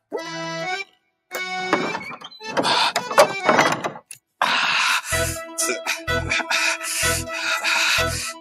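Sound cut by the noise suppressor, from 0.85 to 1.32 s. For about half a second the suppressor misjudged part of the audio as background noise and pulled it down much harder than the surrounding material, with the deepest drop reaching about 22 dB. The result is a sudden sag in level, as if the sound briefly recedes or is partly swallowed, before it returns to its normal level after 1.32 s.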